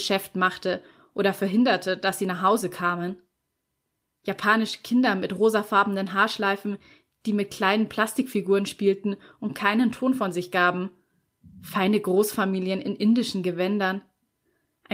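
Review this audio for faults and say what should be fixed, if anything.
Nothing stood out on listening to this speech, so there is nothing here that needs fixing.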